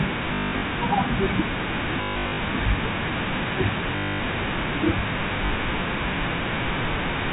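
At 0.34 to 0.62 s, 2.02 to 2.38 s, 3.96 to 4.2 s and 5.46 s, the speech stutters robotically: packet loss with last packet repeated. The receiver replayed the previous packet to fill each gap, so longer runs (up to 180 ms) buzz near 50 Hz, which points to 20 ms packets. Unlike silent dropouts, the gaps are filled with repeated sound, all over G.711 telephone band-limiting.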